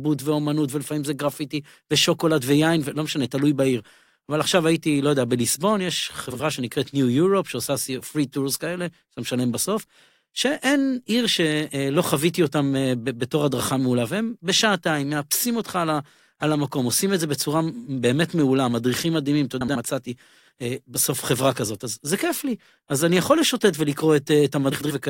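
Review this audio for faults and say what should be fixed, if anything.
Frames out of order occur three times: 6.30 to 6.41 s, 19.61 to 19.76 s, and 24.71 to 24.91 s. In each, two adjacent runs of frames play swapped. The runs last 46.4, 69.7 and 92.9 ms, which fits runs of two, three and four frames. The speech flutters briefly. Nothing is missing, only reordered. To prevent it, reorder packets by sequence number in a jitter buffer before decoding.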